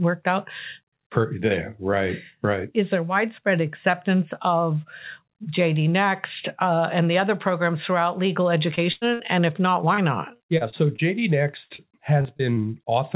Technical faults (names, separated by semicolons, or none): short concealed packet loss; burst of packet loss; repeated packet loss (robotic sound)